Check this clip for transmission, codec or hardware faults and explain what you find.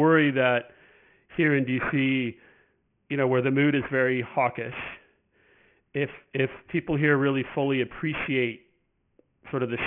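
One fault runs through the whole clip: aliasing. The speech was resampled without a proper low-pass filter, which fits a drop to a 6 kHz rate. Everything above 3 kHz folds back down into wrong pitches, only moderately below the speech itself. Sibilants turn gritty and metallic.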